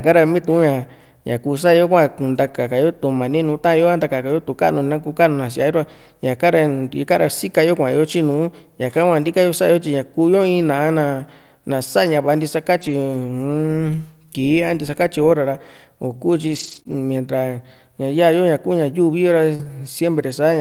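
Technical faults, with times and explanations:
2.43–2.53 s, 9.23–9.25 s, 11.19 s and 12.77–12.91 s, lost packets rebuilt from error correction: packets went missing, and the decoder played the low-bitrate copies carried in the following packets. There is no gap, but about 60 ms, 20 ms, 20 ms and 80 ms of sound turn briefly rougher and noisier.
16.47–19.71 s, scattered short gaps: packets arrived late or not at all, one at a time. The receiver covered roughly five small holes by extending the preceding sound, the longest about 40 ms. That leaves brief ticks and smeared hiccups across about 4% of this stretch.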